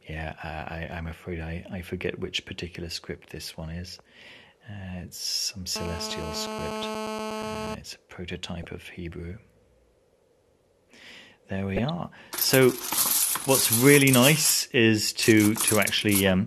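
At 3.94 s a corrupt frame is decoded: flipped bits in a couple of compressed frames were played anyway, misplacing energy into a brief blip peaking near -30 dBFS. From 5.76 to 7.75 s a GSM phone buzz sits about 8 dB below the signal, a hard, raspy 217 Hz tone rich in harmonics from rectified call-mode radio bursts, held steady rather than hum-like at mains frequency. Further decoded corrupt frames follow at 8.63–8.66 s and, louder at about -15 dBFS across roughly five frames, at 11.76–11.90 s, heard as squeaky noise bursts.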